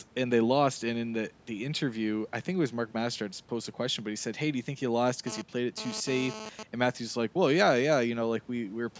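From 5.27 to 6.63 s a hard, raspy buzz, about 11 dB below the speech, sputters in and out. It is GSM phone buzz: a nearby 2G phone transferring data in bursts at 217 Hz, which the audio circuitry rectifies into a harmonic-rich tone.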